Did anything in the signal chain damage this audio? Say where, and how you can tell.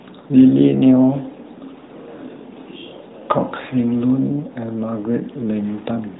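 No, nothing in the chain damaged this speech; the stages all behave as designed, with the band limit heard being the normal effect of the narrowband mobile codec and call microphone processing.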